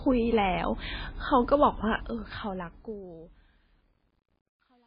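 Throughout, the speech is dull with nothing above 5 kHz, and it sounds watery and swirly, with smeared consonant onsets. This is likely heavy MP3 compression: a starved encoder, consistent with a bitrate near 17 kbps, discarded the treble and switched weak frequency lines on and off between frames.

From 1.95 s to 4.86 s, during the fade-out that begins around 2 s, truncation distortion appears. The gain stage kept too few bits, consistent with roughly 10-bit resolution, and added no dither, so the falling waveform collapses into coarse steps. It is grittiest from 2.98 s to 4.87 s.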